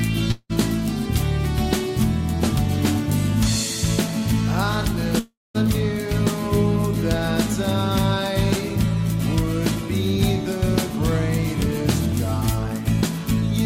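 At 0.31 to 0.52 s and 5.19 to 5.57 s, the sound smears into a fading buzz, then brief silence. Each is likely a long network dropout, with the missing audio never restored.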